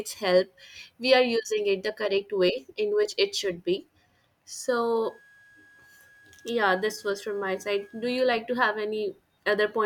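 From 5.04 to 8.25 s a switching supply whistle sits well below the speech, a thin tone near 1.66 kHz, its pitch wandering slightly between 1.65 and 1.66 kHz as the supply's load shifts. That drift and pitch set it apart from steady mains hum.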